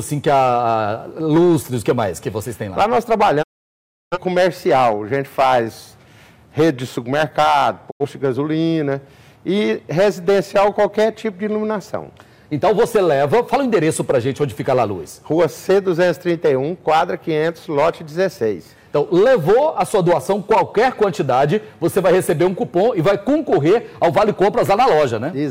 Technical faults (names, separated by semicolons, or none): hard clipping; digital broadcast dropout